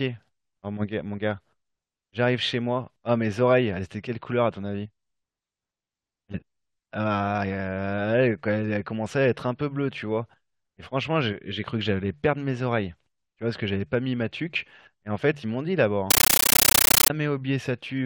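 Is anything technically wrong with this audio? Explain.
Yes. From 16.1 to 17.1 s, the speech gives way to a compressed stream played as audio. The link passed encoded data straight to the output as if it were ordinary samples, without decoding it. Each data frame comes out as a 13.3 ms burst of noise and then silent padding. The bursts repeat 31.25 times a second, which points to an AC-3 stream, possibly at 640 kbps. It sounds like very loud, chattering static.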